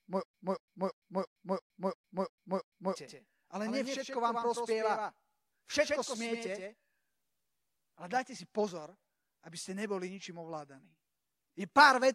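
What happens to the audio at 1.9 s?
At 1.9 s the clip is inside a stutter with silent gaps, already under way from the start and lasting to 2.95 s. The same 232 ms fragment returns eight times, every 340 ms, separated by 108 ms of dead silence, which likely points to a stalled stream replaying its last fragment on each retry. Those silent gaps set it apart from a seamless loop, and the repeats set it apart from a plain dropout.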